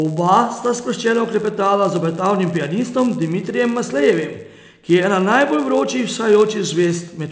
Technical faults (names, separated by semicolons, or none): resampler restarted on every block